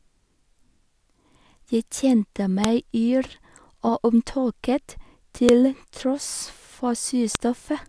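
Sharp, loud clicks snap through the speech at 2.64, 5.49 and 7.35 s, each cutting in regardless of what the signal is doing. This is a file header played as audio: joined WAV pieces kept their headers, so those bytes play back as samples.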